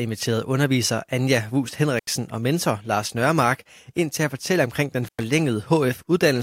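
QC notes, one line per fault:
1.98–2.07 s, intermittent contact: the audio drops out for about 80 ms just before "og mentor", with a short crackle where the signal breaks and again where it returns. A loose plug or cable is momentarily opening the circuit. The crackle comes from the signal being abruptly cut and restored as the contact separates and reseats. While the line is open a faint hiss remains.
5.04–5.23 s, intermittent contact: a second dropout of about 104 ms follows "at fortælle omkring den". It has the same crackle at both edges and faint hiss in the gap, consistent with the same unstable connection breaking again.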